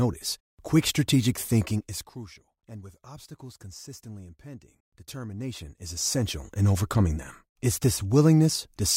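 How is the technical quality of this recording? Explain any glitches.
The recording has one audible glitch, zipper noise, from 1.62 to 2.36 s. The speech level drops by roughly 20 dB in 1 dB steps, about fifty a second, with no smoothing between them. Each step clicks, giving a fast ticking under the speech. A waveform shows a staircase envelope, and a spectrogram shows faint vertical lines.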